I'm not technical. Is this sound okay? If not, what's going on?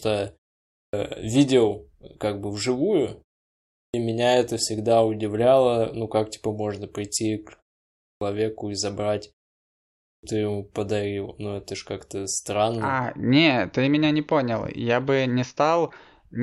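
No. The playback device dozes off during short silences and takes a moment to wake up, a clipped start after a pause. At 0.64, 3.65, 7.9 and 9.9 seconds, about a third of a second of speech is lost, so words begin abruptly.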